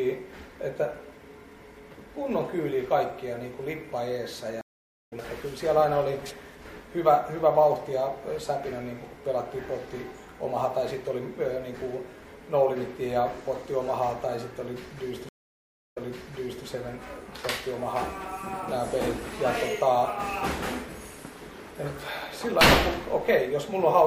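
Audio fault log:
4.61–5.13 s: stream reconnect. The link drops for about 0.49 s of silence, then a fresh decoder picks up the sound roughly 0.3 s further on, skipping material.
15.29–16.65 s: stream reconnect. After 0.66 s of silence the restarted decoder resumes 0.71 s earlier, as the server resends a burst, so a stretch of sound repeats.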